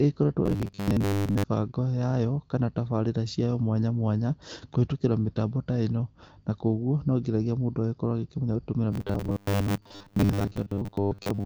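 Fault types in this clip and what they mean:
Robotic sound from repeated short buffers: From 0.46 to 1.44 s, and again from 8.91 s to the end of the clip, the speech becomes a rigid, metallic buzz locked at 100 Hz that still loosely follows the syllables. The likely cause is audio arriving too seldom, so the software keeps replaying its last fragment of about 10 ms to fill the gaps. Most of the real signal in those spans is skipped rather than heard.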